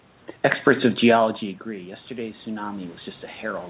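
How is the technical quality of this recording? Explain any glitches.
The quality is held back by one glitch: automatic gain rising from 1.64 s to the end. After the talker moves away around 1 s and the input falls about 14 dB, the gain control slowly lifts voice and room noise together. The waveform envelope swells steadily, and the spectrogram brightens across its whole band, which ends at 4 kHz.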